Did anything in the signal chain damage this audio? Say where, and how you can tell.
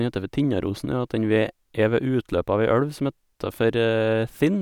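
No, nothing along the way seems to have left a mark on this speech recording; there's no sign of damage at any stage of the chain.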